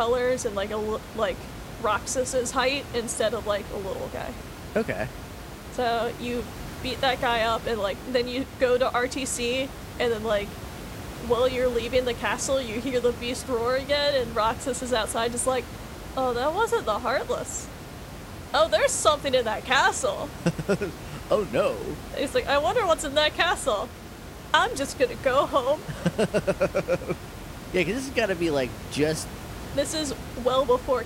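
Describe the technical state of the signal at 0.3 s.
At 0.3 s the speech signal is intact, with only the room's own background noise sitting about 13 dB below the speech.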